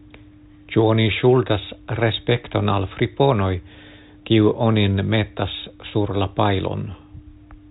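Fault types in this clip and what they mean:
No faults can be heard anywhere in this speech.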